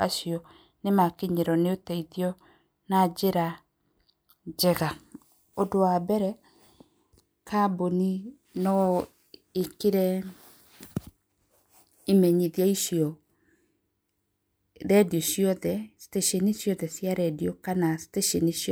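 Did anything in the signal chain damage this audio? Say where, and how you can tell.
No, nothing in the chain has left a mark on this speech recording, and the signal arrives intact with no audible damage from any stage between capture and playback.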